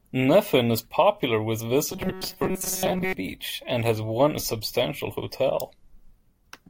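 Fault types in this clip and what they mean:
Robotic sound from repeated short buffers: after "is popular with" a rigid 188 Hz buzz sets in, likely a chunk looping while real audio gets skipped.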